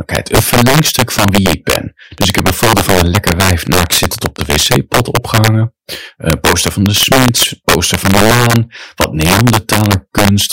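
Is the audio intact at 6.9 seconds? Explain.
No. Integer overflow runs through the whole clip, including 6.9 s: the speech is driven about 8 dB past the integer limit, so a small share of the loudest peaks wrap to the opposite sign instead of being limited, producing violent cracks far harsher than clipping.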